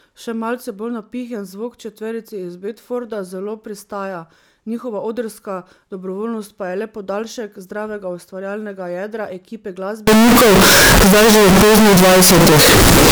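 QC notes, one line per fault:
10.07–13.12 s, float read as integer: the speech abruptly turns very loud and harsh, a near-square buzz at an almost fixed, high level, with background noise as loud as the speech but pitch still traceable. This likely comes from 32-bit float samples being read as integers, so sign and exponent bits set the level.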